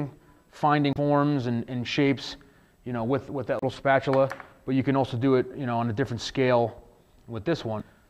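Damaged data in a compressed stream corrupts three short stretches, at 0.90 to 0.97 s, 3.59 to 3.63 s and 7.77 to 7.82 s. The decoder misreads the bad frames and loses sync, so each spot becomes a brief chirp or blip in the sound.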